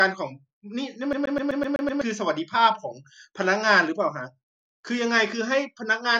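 From 1.13 s to 2.01 s the speech sticks like a CD stuck on one turn. A damaged spot sends the laser back one track each time the disc comes round. The same 0.13 s slice of audio plays seven times over. A brief mute falls at every jump. The result is a fast, even stutter that sounds mechanical. It holds steady for just under a second. Then normal playback resumes.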